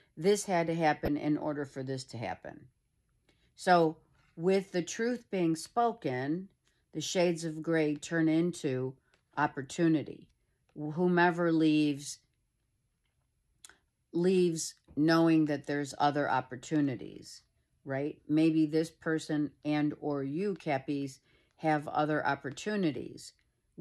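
At 1.05 to 1.08 s there is a short chirp-like blip, and at 20.60 s a much fainter one. Both are a corrupt frame decoded: flipped bits in a couple of compressed frames were played as if valid, so misread gains and codes put energy at the wrong frequencies. Unlike a dropout, the sound isn't simply missing but misplaced in frequency, and unlike a click, the burst lasts about a frame's length. The first peaks near about -20 dBFS, the second only around -50 dBFS.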